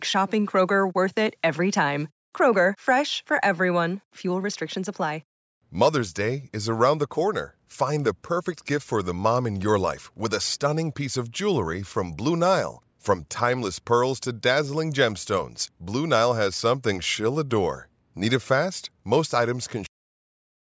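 A speech recording that stops abruptly at 19.86 s, partway through a sound, and drops straight to digital silence with no natural decay for the remaining 0.8 s or so. This is a cut-off end: the final buffers of audio were never written or played out, so the recording ends mid-sound. The band limit at 8 kHz comes from normal call microphone processing and is not part of the fault.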